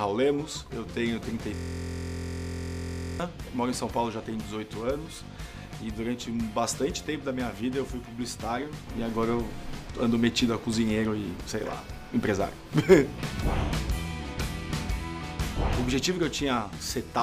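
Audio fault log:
1.55–3.20 s system hang loop: the system froze while playback kept cycling one 23.22 ms slice, fitting a 1024-sample buffer, producing a steady 43.1 Hz buzz.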